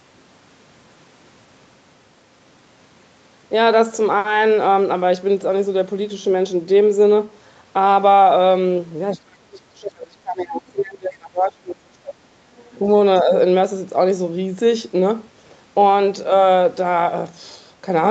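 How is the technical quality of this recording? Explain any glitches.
The recording carries the marks of a two-way call, with nothing above 8 kHz. Its glitches are level drops and a brief leak of a second voice.

Speech suppressed in double talk happens from 9.17 to 12.21 s, sinking by roughly 30 dB, then briefly again at 12.76 to 12.89 s (about 5 dB) and 13.22 to 13.33 s (about 10 dB). The likely cause is an echo canceller that hears both sides at once and turns everything down. Unlike a network dropout, this happens while the other side is talking: the voice dips, loses its high end or cuts out in pieces.

The other side's voice leaking through occurs at 12.57 to 12.75 s as a faint scrap, roughly 35 dB below the speech. It is likely loudspeaker sound that the echo canceller failed to remove from the microphone. It is a distinct, separate voice, not a delayed copy of the talker or background noise.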